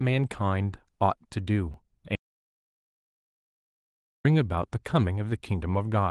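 Speech, carried through Opus voice compression at 20 kbps, has two faults. At 1.74 s there is a repeated buffer. A piece about 5.8 ms long plays twice with a hard join, so it sounds like a brief click. The length fits a 256-sample buffer that was replayed because new audio arrived late. From 2.15 s to 4.25 s comes an audio dropout to silence. The speech cuts off mid-flow for about 2.1 s. The gap is silent, with no room tone. The likely cause is a lost input, such as a disconnected device or a failed link. Everything said in that span is gone.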